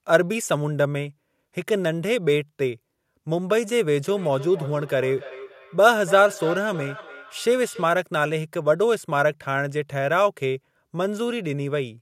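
From 4.08 to 8.02 s there's a feedback echo between two devices: each word comes back roughly every third of a second, thinner and ringier, peaking about 14 dB under the speech.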